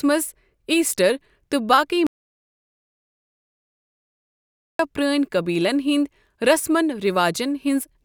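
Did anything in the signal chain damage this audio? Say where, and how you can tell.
Yes. An audio dropout to silence hits the speech from 2.07 to 4.79 s, about 2.7 s of the recording. The input feed was most likely lost at the capture stage, through a disconnected device, a failed link or a mute, while the recorder kept writing silence. You can tell because the speech cuts off in mid-flow and then resumes abruptly, and the gap is dead digital silence with no room tone or noise floor underneath. Whatever was said there is gone.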